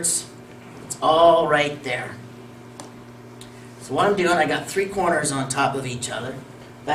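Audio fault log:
No faults detected in the audio.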